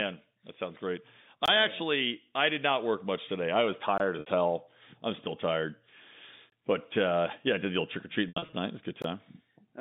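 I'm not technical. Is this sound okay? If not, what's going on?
No. There are two faults in this speech recording.

Gap between chunks: the audio was delivered in pieces about 2.5 seconds long, with a short silence left between each piece. You hear a tiny hole of about 20 ms at 1.46, 3.98 (just after "much today I was"), 6.50 and 9.02 seconds.

Packet loss with pitch repetition: some pieces of the audio went missing in transit, and the receiver filled each hole by repeating the last bit of voice. At 4.20 seconds, just before "hell I'm still tired", this causes a brief buzzy hold of about 60 ms. From 8.28 to 8.53 seconds, after "the old trick or", there are several short dropouts, the longest about 80 ms.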